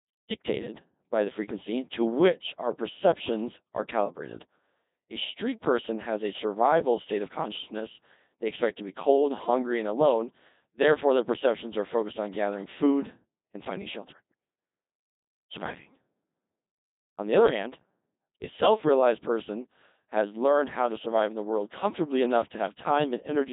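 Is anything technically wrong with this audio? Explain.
Yes. The speech has passed through the Codec 2 vocoder for the whole clip. The codec keeps no waveform. It sends only pitch, voicing, energy and a coarse spectral envelope, then rebuilds the voice from sine waves. The damage here is heavy, which fits a rate of about 2.4 kbit/s. The result sounds robotic and buzzy, with a synthetic tone. Nothing is left above 3.8 kHz, so the speech is dull and muffled.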